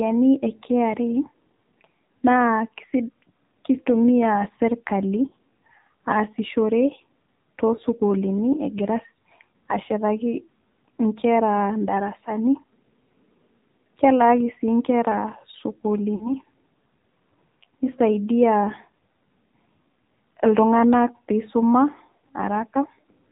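The whole recording carries the AMR narrowband mobile codec. Nothing above 4 kHz survives, so the speech sounds thin and boxed. The model of the vocal tract is fed few bits, which fits a low rate near 7.4 kbps. The voice turns buzzy and synthetic.

Lost AMR speech frames then break the speech at six points. The decoder fills each gap by reusing the last good settings at falling gain. At 5.28 s, after "keitumiya sirtkali", a 40 ms dip warbles; that fits two lost frames. Brief single-frame dips of about 20 ms follow at 7.76 s, just before "sukuluuni egira", and at 9.84 s. Another 40 ms smear comes at 16.16 s, and a 20 ms dip at 17.84 s. At 22.18 s, after "ltunganak peisuma", a 60 ms stretch drags and fades.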